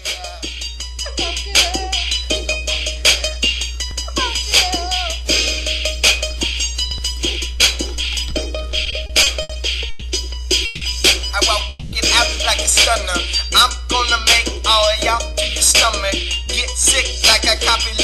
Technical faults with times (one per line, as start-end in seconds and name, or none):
8.85-9.51 repeated stalls (stutter)
9.89-10.03 call audio freeze
10.65-10.83 call audio freeze
11.69-11.94 call audio freeze